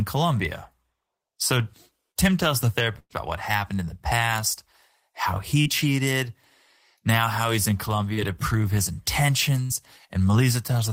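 At 2.11 s a short concealed packet loss leaves a brief smear where about 40 ms never arrived and was patched by continuing the last sound. A burst of packet loss follows at 2.99 to 3.13 s, between "tells the" and "about what happened in." About 120 ms is lost, and the extended sound fades into roughly 40 ms of silence, so audio goes missing rather than just blurring. Short concealed losses return at 5.62 s, after "in the past how," and at 8.13 s, between "now how he's in" and "to prove his." A second burst at 9.65 s fades out over about 46 ms of patched sound instead of giving a quick tick.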